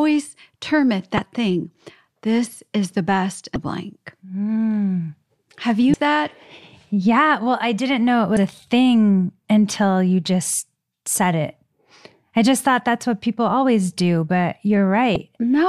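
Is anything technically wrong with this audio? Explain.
Yes. Short glitches break into the speech at 1.15–1.19 s (after "term it"), 3.53–3.56 s (after "is the best"), 5.91–5.94 s, 8.34–8.37 s (between "I didn't know it" and "a thing until you") and 15.13–15.16 s. These are damaged data in a compressed stream: corrupted frames make the decoder lose sync briefly.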